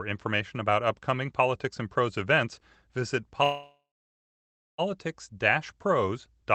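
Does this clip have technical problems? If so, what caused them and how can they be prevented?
Yes. After "events visit", a call audio freeze runs from 3.43 to 4.81 s: the sound stretches into a fading buzz, then about 0.97 s of silence, and the speech resumes exactly where it stopped. The likely cause is delayed packets draining the jitter buffer. Unlike packet loss, nothing is cut out; the pause is inserted. A larger or adaptive jitter buffer and a steadier network route would prevent it.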